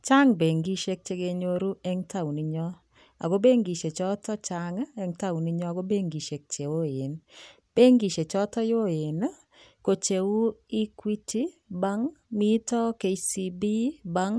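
A speech recording with no technical faults anywhere in the signal.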